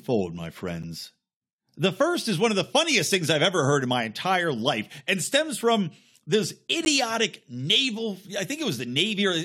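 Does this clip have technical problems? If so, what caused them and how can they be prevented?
Yes, there are two short gaps between stream segments in this speech, one at 0.83 s lasting about 10 ms and another at 6.85 s lasting about 11 ms. Each is a hard-edged dropout to silence. The two are roughly 6 s apart, which fits 6-second segment boundaries where the timestamps don't quite line up. The player fills the hole with silence, but no audio is actually lost. To prevent it, make sure the packager writes contiguous timestamps so each segment starts exactly where the previous one ends.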